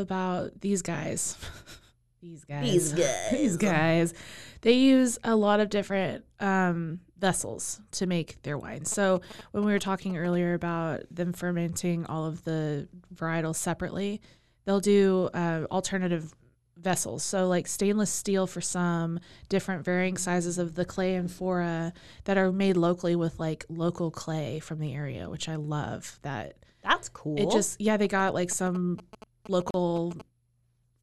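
From 8.92 to 10.35 s, between "to make their wine" and "about them fermenting all", GSM signalling bursts break in. A nearby 2G phone is exchanging short groups of radio bursts with the network, and the audio circuit rectifies them into a galloping dit-dit-dit of brief buzzes at about 217 Hz, sitting well below the speech. On a spectrogram they show as clustered vertical stripes with a comb of 217 Hz harmonics. The waveform shows them as bursts of regular spikes.

The same GSM signalling bursts return from 28.04 to 30.22 s, just after "just yeah", with the same 217 Hz rhythm and a similarly low level.

Inside that stretch, from 29.71 to 29.74 s, there is a gap at a join of encoded pieces. The audio was encoded in separate pieces and joined untrimmed, so one run's start-up delay and the other's padded final frame both remain. This leaves a 36 ms gap that opens in continuous sound, and the speech then resumes where it stopped. 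The waveform drops to a flat line with slightly smeared edges. A spectrogram shows a narrow blank vertical band cutting across every frequency.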